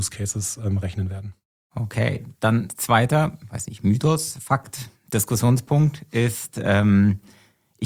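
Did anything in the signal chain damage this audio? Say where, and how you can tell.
No, no signal-chain damage heard.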